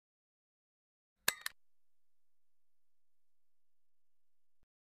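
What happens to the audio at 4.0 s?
At 4.0 s the audio sits inside a drift correction step running from 3.49 s to the end of the clip at 4.93 s. Playback slows by about 6.5% and pitch drops 116 cents, just over a semitone, likely from clock-matching software resetting its rate.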